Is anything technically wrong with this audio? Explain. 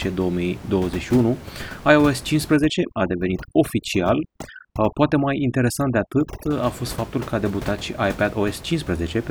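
Yes. Overdone noise removal affects the speech from 2.56 to 6.51 s, ending just before "a fost faptul că". A noise reduction stage set far too aggressively treats every frequency band close to its noise estimate as unwanted and cuts it down or out entirely. The quieter parts of the speech are stripped away along with the room noise, which outside this stretch sits about 15 dB below the speech. The background drops and breaks up into twinkling specks.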